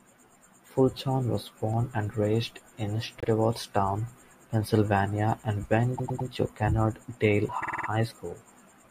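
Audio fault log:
3.20–3.28 s, repeated frames: a short stutter as a 78 ms block of compressed audio, which fits about three frames, plays once more, adding 78 ms.
5.97–6.28 s, repeated frames: a jerky triple stutter as a 104 ms block, likely four frames, plays three extra times, adding 313 ms.
7.62–7.88 s, repeated frames: a rapid stutter as a 52 ms block, which fits two frames, plays five extra times, adding 261 ms.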